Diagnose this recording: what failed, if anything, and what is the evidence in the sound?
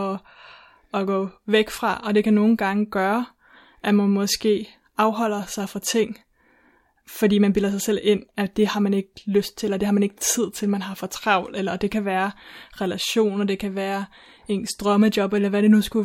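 Careful listening turned up nothing in this speech recording that points to a failure anywhere in the chain.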